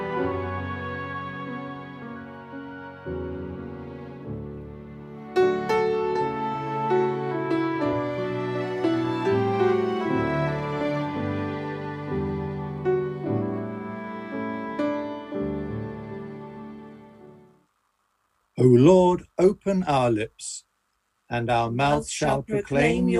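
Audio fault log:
No faults heard in this clip.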